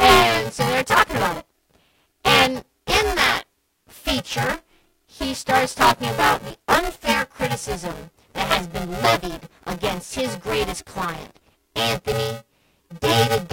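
A steady robotic buzz at about 345 Hz rides on the speech from start to finish, present only while there is signal. This is buffer tearing: writer and reader cross mid-period, so roughly half of each buffer replays audio about 10 ms old, and the buzz rate fits a 128-sample buffer.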